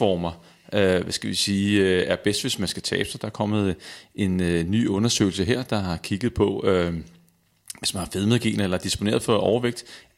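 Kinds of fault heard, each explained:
No audible faults turn up anywhere in this speech recording.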